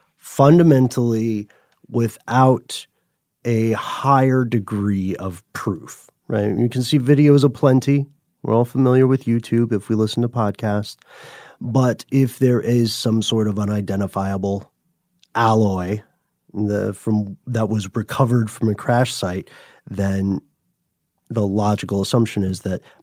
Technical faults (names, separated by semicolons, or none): none